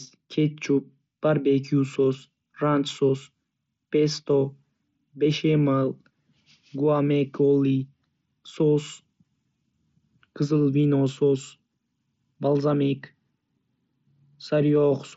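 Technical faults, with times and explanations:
No technical fault can be heard in this speech, which comes through a Bluetooth mSBC headset link working normally, with nothing above 7.7 kHz.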